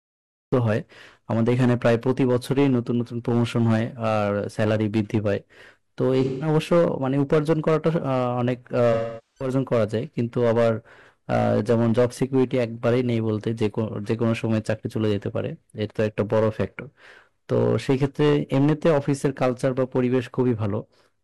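From 0 to 0.53 s there is digital silence, and then speech enters abruptly in the middle of a sound. This is a cut-off start: the recording began late. It differs from a quiet lead-in or a fade-in because the first sound has no natural attack or gradual rise.

Hard clipping runs through the whole clip. The signal is overdriven by about 10 dB, so a small share of samples went past the converter's limit and their peaks are sliced flat. On louder syllables this produces a harsh fuzz. Codec artefacts would stay roughly even, but this distortion rises and falls with level.

AAC frame loss with concealment occurs at 6.24–6.48 s and again at 8.93–9.50 s. The decoder patched the lost stretches from the last good spectrum. The first gap lasts about 170 ms, which fits roughly four frames, and sounds smeared and phasey. The second lasts about 430 ms, which fits about ten frames; it decays toward silence and then fades back in. 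A hard dropout would cut off sharply, while these gaps smear and fade.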